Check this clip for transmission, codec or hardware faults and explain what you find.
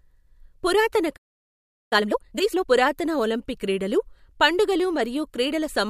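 Two related playback faults occur early in this speech clip: a stall followed by a hurried catch-up.

From 1.16 to 1.93 s a playback stall cuts the speech off mid-flow for about 0.75 s. The player was likely starved of data or its thread was blocked. The waveform drops to a flat line, and the spectrogram shows a clean vertical gap of blank columns.

From 1.93 to 2.67 s time-compressed catch-up follows. The player trims its backlog by splicing out short segments and cross-fading the joins, running at 2.0 times normal speed without raising pitch. The speech sounds rushed, and spectrogram formant patterns appear squeezed horizontally.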